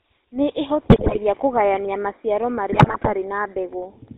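A speech recording has passed through the GSM full-rate codec, which squeezes the voice into a vocal-tract model excited by sparse, regularly spaced pulses. Only a third of the excitation detail survives and nothing above 4 kHz is carried, so the whole clip has a buzzy, gravelly roughness and a dull top end, a level of damage that fits the 13 kbps full-rate GSM stream. On top of that, GSM bit errors from a weak radio link reach the decoder and corrupt the filter, pitch and gain parameters of individual frames. The spectrum lurches and the level spikes, so the sound breaks into squawks, pops and gargling from 0.90 to 1.18 s, just before "kũgayania maciaro", and again from 2.72 to 3.11 s, some time after those words. The second burst runs longer, which points to more frames being hit, though the error rate there sounds somewhat lower than in the first.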